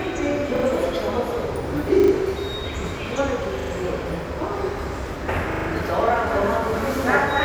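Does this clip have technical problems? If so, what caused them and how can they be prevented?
Yes. There are repeated buffer stutters at 0.56, 2.0, 3.6 and 5.52 s. Each is a brief hard-edged repeat lasting 0.08 to 0.16 s, and the segment length fits a 40 ms buffer. Audio missed its deadline, so the device replayed the last buffer two to four extra times. Larger buffers or better scheduling would prevent it.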